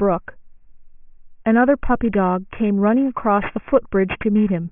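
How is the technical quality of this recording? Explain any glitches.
Not great: the speech has aliasing running through the whole clip. It sounds like the audio was taken down to a much lower sample rate, which fits a drop from 24 kHz to 6 kHz, with no anti-alias filter first. Everything above 3 kHz folds back below it as wrong, unrelated tones, roughly 20 dB under the speech, so sibilants come out gritty and metallic and the spectrum runs hard right up to 3 kHz.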